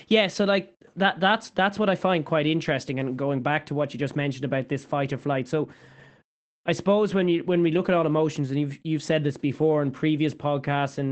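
Speech over an Opus call path: between 0.31 and 0.37 s, a lost packet was rebuilt from error correction, so instead of a gap there is about 40 ms of rougher, noisier audio, which fits two lost 20 ms packets replaced by low-bitrate copies.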